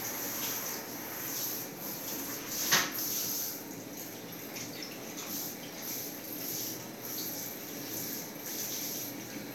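No technical faults are audible anywhere in the recording.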